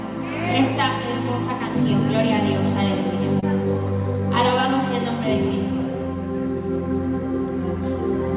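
The audio comes over a call link, and nothing above 4 kHz gets through, which fits a G.711 mu-law codec at 64 kbps. At 3.40 to 3.44 s there is a short concealed packet loss. About 20 ms of audio arrived too late. The receiver covered the gap with 22 ms of sound extended from just before it, then blended back in. It comes across as a brief smear or wobble.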